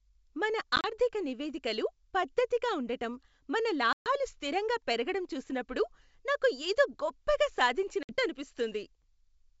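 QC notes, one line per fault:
0.76–0.93 s, 3.93–4.08 s and 8.03–8.15 s: packet loss on an ADPCM call. The speech drops to hard-edged silence in three places. At 0.76–0.93 s, before "నివేదికలు పద్దతిగా ఉండటం మన", the gaps are scattered and add up to about 50 ms over 80 ms, with the longest lasting 30 ms. At 3.93–4.08 s, between that phrase and "స్థిరంగా పెరగడం చూసినప్పుడు నాకు", about 130 ms is lost. At 8.03–8.15 s, after "చూసినప్పుడు నాకు ఏదో గొప్పగా", the gap is 60 ms. The silences fit some 27 packets going missing, with around fifteen lost in the longest stretch. Each loss pushes the decoder's adaptive predictor and step size out of step with the sender's. As a result, the speech comes back slightly distorted, and it settles over the following tens of milliseconds.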